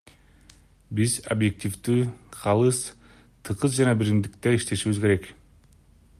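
Listening to this speech recording, nothing stood out as a technical problem at any point.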